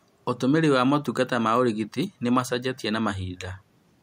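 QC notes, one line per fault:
No faults found.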